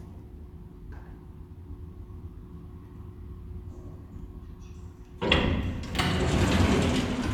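No technical faults can be heard anywhere in this recording of everyday sounds.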